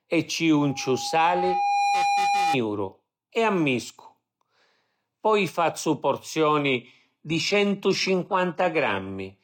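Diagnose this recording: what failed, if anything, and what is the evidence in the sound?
Loudspeaker feedback squeal, in the acoustic path between loudspeaker and microphone. From 0.60 s to 2.58 s an 810 Hz tone swells over about one and a half seconds. It reaches roughly the level of the speech. The loop gain exceeded one at that frequency.

An adaptive stream at a lower bitrate, at the network and codec stage. At 6.64 s the quality drops abruptly and stays down to the end, with no gap. The treble turns thin, with nothing above 14.9 kHz. This points to a switch from about 96 kbit/s AAC to roughly 20 kbit/s HE-AAC.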